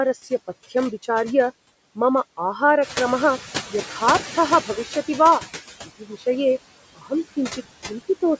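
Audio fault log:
Throughout: noise suppressor artifacts. The suppressor estimates the steady background in each frequency band and pulls those bands down frame by frame, cutting the noise by about 19 dB. Because the gain changes with every frame, the background drops away in the gaps and swells back beneath each phrase. The speech itself sits below the call processing's normal 8 kHz ceiling.
2.81 to 4.98 s: noise suppressor catching up. Around 3.0 s the room noise jumps by about 11 dB, but the suppressor's noise estimate is still tuned to the quieter level before it. For the first stretch the louder background gets through with only about 11 dB of reduction. Over roughly 2.2 s the estimate adjusts, and the noise sinks back down once the suppressor has caught up.
5.85 to 6.24 s and 6.95 to 7.12 s: speech cut by the noise suppressor. In both spots the suppressor mistakes parts of the speech for background and lowers them along with it. 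The first cut lasts about a third of a second and drops the sound by up to about 15 dB. The second is shorter, about a sixth of a second, but goes deeper, up to about 20 dB. The affected syllables sound swallowed and faint.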